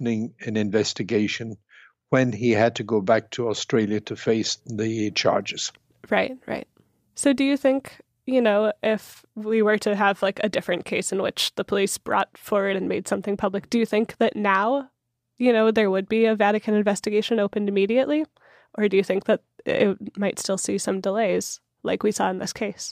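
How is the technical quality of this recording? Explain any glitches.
The technical quality of the recording is sound, with no glitches to explain.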